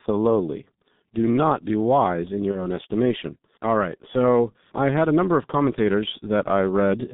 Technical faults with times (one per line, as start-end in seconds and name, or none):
0.00-7.13 G.723.1 codec
2.51-2.66 VoIP packet loss concealed by the speech codec